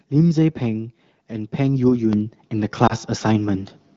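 At 2.13 s the microphone volume is stepped up, by about 8 dB. The speech and the background noise get louder together, in one jump. The call software judged the input too quiet and raised the device's input volume in a single step rather than easing it up.

From 2.87 to 2.95 s there is lost AMR speech frames. The sound dips briefly and warbles, then recovers slightly rough. The length fits one lost 20 ms frame that failed its radio checksum. The decoder bridged it by repeating the last good pitch and vocal tract settings at reduced gain. The AMR wideband (HD Voice) codec underneath runs at 12.65 kbit/s, a rate at which speech is clear.

At 3.54 s the microphone volume is stepped up again, this time by about 6 dB. As before, voice and background rise together in one audible jump.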